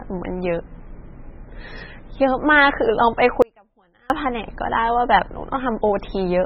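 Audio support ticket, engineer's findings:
MP3 compression, whole clip: speech sounds watery and swirly, nothing above 5.6 kHz, s sounds smeared and chirpy. Likely a starved encoder, which fits something like 16 kbps, so it chops the treble and flickers weak frequency lines frame to frame.

Audio dropout to a faint residue, 3.42 to 4.10 s: signal drops out abruptly for about 0.68 s, leaving only a faint residue roughly 35 dB down, then snaps back. Likely the source briefly lost while the downstream path stayed live.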